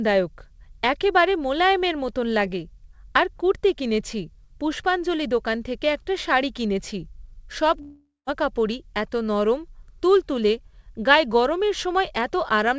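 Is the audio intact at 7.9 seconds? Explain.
No. A long network dropout runs from 7.82 to 8.30 s, so 7.9 s falls inside it. About 450 ms of speech never plays. The most likely cause is that packets stopped arriving and the receiver padded the gap by extending the last sound for roughly 0.45 s. That fill is heard as a fading buzzy hiss, followed by a short silence of about 160 ms before the speech resumes, with the missing stretch gone.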